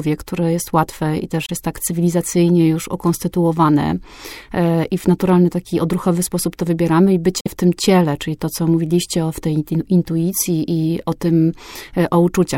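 Audio packets likely arrived too late over a Bluetooth link and were dropped, causing a Bluetooth dropout. The speech cuts to silence at 1.46–1.51 s and 7.40–7.48 s, then resumes further along, as if it had kept playing.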